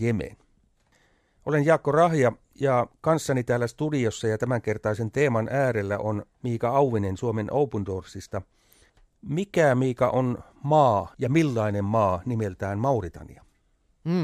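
No technical faults are audible anywhere in the speech recording.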